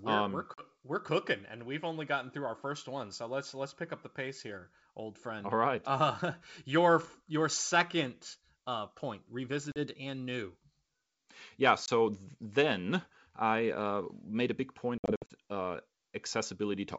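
Packet loss on an ADPCM call drops short runs of packets, leaving the decoder's predictor and step size out of step with the sender's. Hard-edged gaps of 40 ms open at 0.54–0.63 s after "we're um we're" and at 9.72–9.78 s after "your second uh point". A 20 ms gap follows at 11.86–11.89 s. A cluster of holes totalling 180 ms, the longest 60 ms, is scattered across 14.98–15.33 s after "made a big point". After each gap the speech returns with brief distortion, while the G.722 wideband sound around the gaps stays clear.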